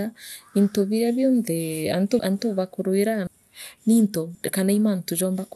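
The decoder skipped whole compressed frames, 24 ms each, so the speech jumps ahead: about ten frames (roughly 200 ms) lost at 2.19 s after "into biria bionthee" and again at 3.27 s, and a few frames (roughly 100 ms) at 4.35 s.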